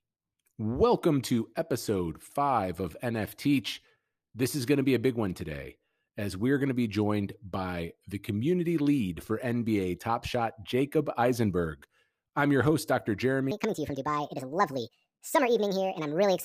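A section at the wrong speed closes out this speech recording: from 13.51 s to the end, playback runs about 1.58 times too fast, likely from the section being fitted to the wrong clock. The speech turns hurried and rises roughly seven semitones.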